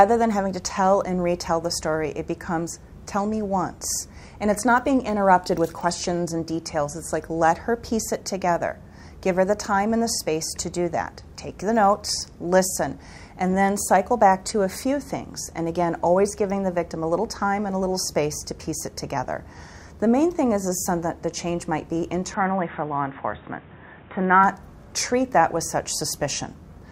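At 22.34 s the sound abruptly goes dull and boxy, and it stays that way until about 24.44 s, when the full sound returns. Nothing comes through above about 3.8 kHz in that stretch, and a different background hiss appears, roughly 30 dB below the signal. The level barely moves and there's no gap at the change. That points to the input likely switching to a poorer device, maybe a headset's narrowband call profile, and then back.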